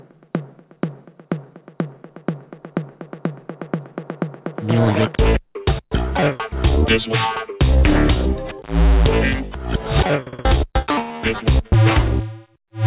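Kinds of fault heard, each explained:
Short concealed packet loss: at 10.82 s about 20 ms of audio failed to arrive in time, and the receiver papered over it by extending the preceding sound, giving a brief smear rather than the hard silence or click of an unconcealed dropout, within a band topping out near 4 kHz.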